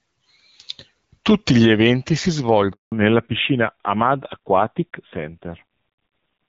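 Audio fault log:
2.72–2.92 s, handover gap: after "gli eventi si" the speech fades within milliseconds into 200 ms of flat silence, a blank column on the spectrogram, as the network switch delivers no frames.
2.92 s to end, fallback to narrowband: energy above 4 kHz disappears, a hard ceiling on the spectrogram, and speech turns duller and rougher, which suggests a drop from HD Voice to a narrowband codec near 7.4 kbit/s.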